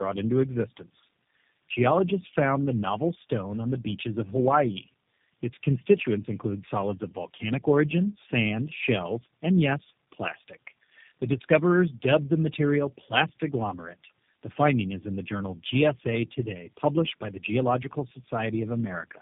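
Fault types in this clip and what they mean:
Tandem speech coding: throughout, the speech sounds like it was decoded and re-encoded by three low-rate speech coders in turn, the last sounding like G.729A. The compounded damage makes it rougher and more warbly than any single narrowband codec, and it is band-limited at 3.7 kHz.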